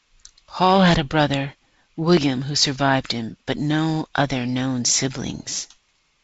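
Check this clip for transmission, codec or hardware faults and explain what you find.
No faults found; the speech sits on G.722 wideband coding, with a band edge at 7.7 kHz and light coding noise that points to the 48 kbit/s mode.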